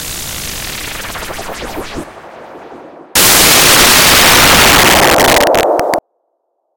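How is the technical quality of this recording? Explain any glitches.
There's one serious glitch, and it's hard to miss. From 3.15 s to 5.99 s the sound turns into a blast of loud, harsh broadband noise: samples built from the wrong bytes. The reader is stitching each sample together wrongly, whether off by a byte, with the byte order swapped or with the alignment misread, so the jittery low bits end up as the big part of every value. That's why it comes through as loud, harsh noise.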